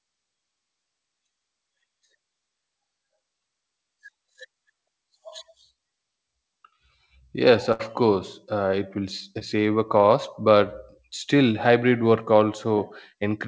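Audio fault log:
7.72–7.81 s, burst of packet loss: a held, fading smear just before "course uh", then a jump. About 80 ms never arrived, and the receiver stretched the last sound across 74 ms.
9.39–9.42 s, short concealed packet loss: a brief wobble or smear. About 20 ms arrived too late, so the receiver extended the preceding sound for 11 ms, then blended back.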